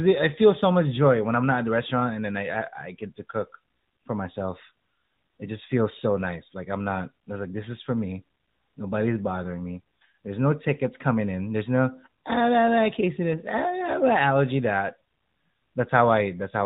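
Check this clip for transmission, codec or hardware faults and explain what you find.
One codec fault runs through the whole speech clip. AMR narrowband mobile codec: nothing above 4 kHz survives. The pulse-driven vocal model sounds plainly buzzy and synthetic, which fits the 10.2 kbps mode.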